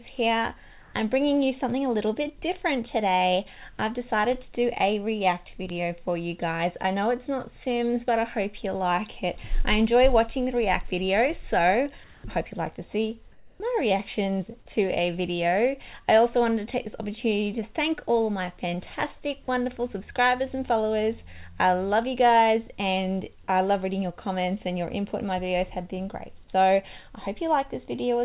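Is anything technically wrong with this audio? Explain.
Yes, two kinds of fault occur, heard through a narrowband call path that leaves nothing above 4 kHz, which fits G.711 mu-law.

Comfort noise in place of the background appears at 0.82–0.94 s, 12.04–12.24 s and 13.32–13.60 s. In each gap the background goes flat and featureless, about 6 dB louder in the first, about 1 dB louder in the second and about 1 dB quieter in the third. The likely cause is discontinuous transmission: the receiver synthesises shaped noise while the sender pauses. A spectrogram shows smooth, uniform texture in those stretches.

A bit error spike occurs at 5.70 s and again at 23.82 s, each a single corrupted sample producing one sharp tick unrelated to the sound. The waveform shows an isolated one-sample jump; a spectrogram shows a thin vertical line across all frequencies.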